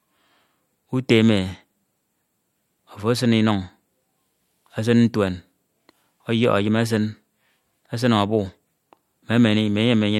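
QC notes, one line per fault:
No faults heard in this clip.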